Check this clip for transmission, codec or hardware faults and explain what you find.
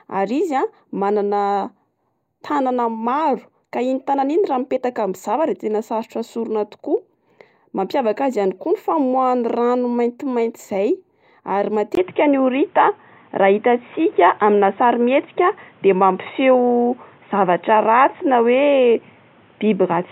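One fault is present. At 11.95 s, after a brief silence, the input likely switched to a poorer device. The change lasts to the end. That device passes a narrower band, with nothing above 3.8 kHz. The speech turns dull and boxy. Its level shifts by a few dB. A new background noise appears, roughly 35 dB below the speech.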